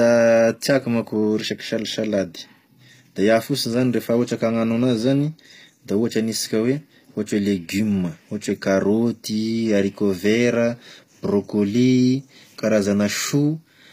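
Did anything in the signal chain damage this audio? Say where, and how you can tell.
Yes, at the codec stage, throughout the speech. The treble sounds synthetic: s sounds come out gritty and lispy, and nothing is present above 15.5 kHz. This is likely HE-AAC compression, whose spectral band replication rebuilds the top band from copied lower bands at a low bitrate, perhaps around 24 kbps.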